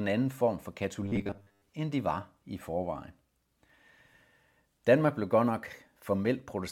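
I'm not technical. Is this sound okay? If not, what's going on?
No. From 1.04 to 1.69 seconds, the speech turns into a flat, metallic buzz near 100 Hz. This is robotic sound from repeated short buffers. The likely cause is audio arriving too slowly, so tiny 10 ms pieces get replayed through most of that stretch.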